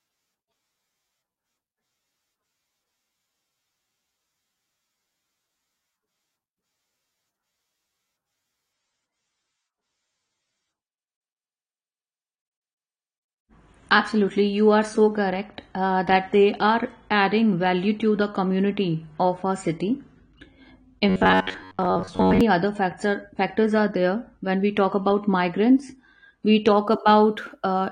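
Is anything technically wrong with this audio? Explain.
Yes, there are two faults, and the second falls inside the first.

From 8.73 s to 26.73 s the speech suddenly turns coarser, with more codec artefacts, and there is no gap at the switch. This is an adaptive stream at a lower bitrate: the player swapped to a leaner encode, consistent with a drop from roughly 96 to 32 kbit/s AAC. A dropout would leave silence, but here the sound stays continuous and only gets coarser.

From 21.09 s to 22.41 s the speech turns into a rigid metallic buzz at 93.8 Hz. This is robotic sound from repeated short buffers. The likely cause is the player looping a slice of about 10.7 ms while most of the real audio is skipped. Unlike the bitrate drop, this imposes a fixed pitch rather than just adding codec artefacts.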